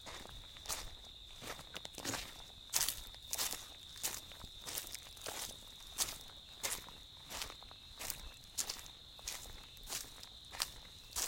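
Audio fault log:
Nothing stood out on listening to these sounds.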